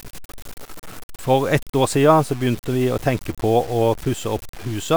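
Throughout the speech, a grainy, signal-following distortion sits about 20 dB below the level, and the quietest passages sputter or drop out. This points to low bit depth without dither, likely around 6 bits truncated, so the error tracks the waveform instead of forming steady hiss.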